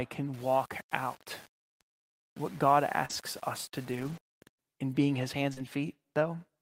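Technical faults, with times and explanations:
0.34–4.59 s, low bit depth without dither: speech picks up a grainy, gritty texture that follows the sound, noise about 25 dB down; likely from coarse rounding, roughly 7 bits.
3.05–4.26 s, scattered short gaps: about three small dropouts, the longest around 40 ms, each patched by stretching the previous sound, leaving quick ticks and hiccups.
5.54–5.59 s, short concealed packet loss: 40 ms went missing and about 30 ms was filled by carrying the last sound forward, giving a brief smear.
5.57–5.59 s, lost packet rebuilt from error correction: the final 20 ms plays from a low-bitrate backup copy carried in the next packet, so it comes out rougher and noisier.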